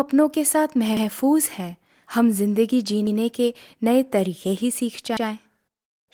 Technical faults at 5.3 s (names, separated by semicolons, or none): overlapping chunks